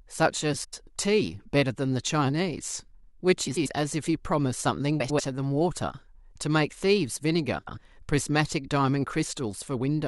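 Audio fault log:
0.64–0.83 s, 3.47–3.67 s, 5.00–5.20 s, 7.58–7.78 s: frames out of order. In each 0.2 s stretch, two adjacent 93 ms blocks play exchanged. The result is a garbled flutter, and no time is lost. The block length fits four-frame runs.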